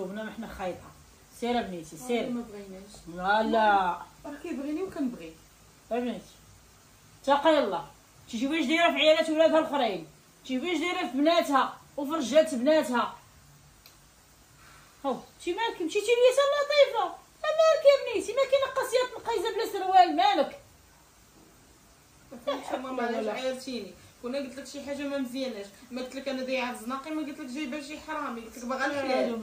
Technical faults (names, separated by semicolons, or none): none